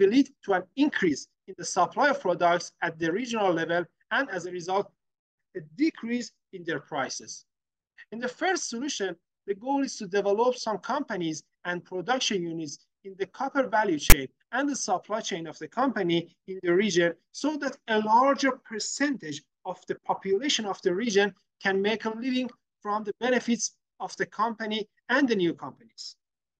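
At 14.10 to 14.13 s a short block of file tags is played as audio: metadata text and its zero padding were decoded as if they were samples. The text part gives a loud, rasping burst pushed off-centre, since character bytes sit mostly on one side of zero, and the padding then drops to dead silence. The hard edges and lopsided rasp set it apart from a plain dropout or a symmetric digital click.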